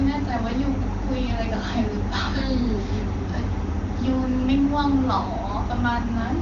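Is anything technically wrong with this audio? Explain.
No, nothing stood out as technically wrong on listening to this speech clip.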